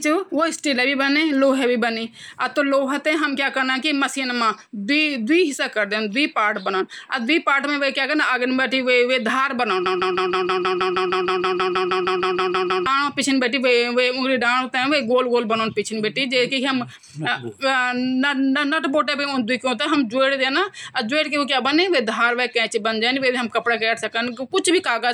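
At 9.86 s the speech locks into a broken-record loop that runs until 12.86 s. A fragment about 158 ms long repeats exactly, back to back, 19 times, giving a rapid mechanical stutter for roughly three seconds. The likely cause is a stall in the player, encoder or stream, which kept resending the last buffered piece. Whatever speech should have played during those three seconds is missing when normal playback resumes.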